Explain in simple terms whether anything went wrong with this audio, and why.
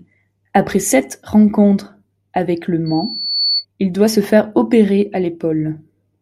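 A microphone picked up the loudspeaker it was feeding, creating loudspeaker feedback squeal. From 2.86 to 3.65 s, a single 4.4 kHz tone swells over roughly half a second into a piercing whistle about as loud as the speech.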